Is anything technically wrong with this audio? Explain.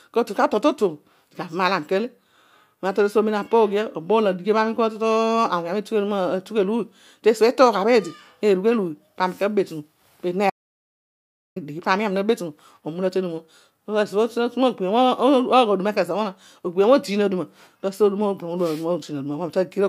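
Yes. From 10.5 to 11.56 s the speech cuts off mid-flow into dead, total silence with no room tone, then resumes abruptly, losing about 1.06 s of audio. This is an audio dropout to silence, likely where the input was briefly lost while recording continued writing zeros.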